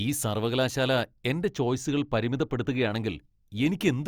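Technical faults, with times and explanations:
1.48–2.91 s, channel delay (comb filtering): just after "ഈ സർവ്വകലാശാല എന്റെ" the speech goes a bit dull. One channel lags the other by a couple of samples, well under a millisecond, so summing to mono cancels the top end, with the first notch up around 10 kHz.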